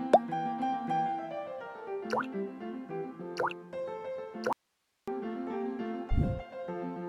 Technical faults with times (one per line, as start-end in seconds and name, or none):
4.53-5.08 audio dropout to a faint residue